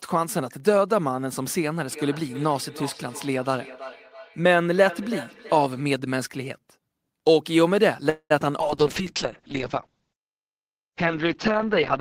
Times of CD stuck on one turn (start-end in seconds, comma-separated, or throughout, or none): none